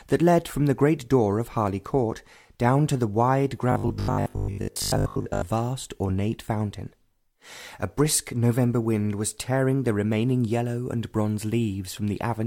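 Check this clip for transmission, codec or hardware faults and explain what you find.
One fault here. From 3.72 to 5.44 s there's robotic sound from repeated short buffers: a rigid 50 Hz buzz, likely from a 20 ms chunk replayed over most of that stretch while fresh audio was skipped.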